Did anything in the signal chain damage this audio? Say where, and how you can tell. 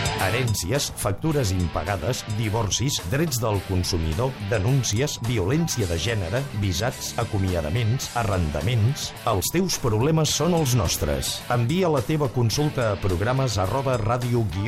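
Yes. A bit error spike at 4.93 s: one sample jumps to about -11 dBFS and returns. It's a single broadband tick from a flipped bit in memory or a digital link.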